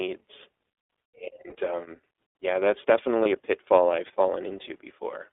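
Throughout, the iLBC codec restricts the speech to roughly 300 Hz to 3.6 kHz. Each 20 ms frame is coded independently, leaving plainly audible roughness and a synthetic edge, which fits the 15.2 kbps mode.

At 1.50–1.54 s and again at 3.24–3.28 s, lost iLBC frames leave short gaps that fit a single dropped 20 ms frame. The decoder bridges each gap by repeating the last pitch cycle with added noise, producing a brief buzzy, held vowel before clean decoding resumes immediately.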